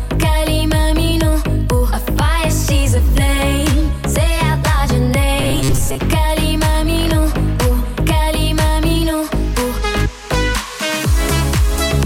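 From 5.4 to 6.0 s, audio likely arrived too seldom: robotic sound from repeated short buffers, about half replayed, leaving a rigid, metallic 134 Hz buzz.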